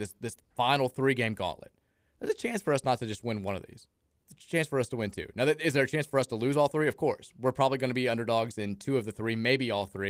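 No technical faults can be heard in this recording.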